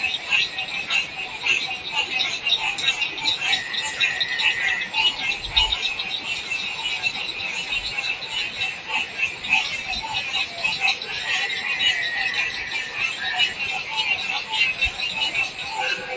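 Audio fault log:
Throughout: noise suppressor applied to music or sounds. A suppressor designed for speech stays active across the whole clip and treats steady, sustained parts of the sound as background noise. Sudden onsets get through, but held portions and decaying tails are repeatedly pulled down, with the gain swinging by around 10 dB. The result is an audible pumping and thinning. A plain level ride or compressor would not single out sustained material this way. The call microphone path's limit, with nothing above 8 kHz, is a separate, normal band edge and is not this fault.
1.07 to 1.39 s and 8.73 to 8.89 s: sound cut by the noise suppressor. At these two moments the suppressor misreads a specific stretch of sound as noise and ducks it below its surroundings, by about 5 dB in the first and about 6 dB in the second. Each dip lasts only a fraction of a second. What sets these apart from the continuous pumping is that they are brief, localised holes: the fading or steady part sinks while the attack stays intact, unlike a dropout, which would silence everything.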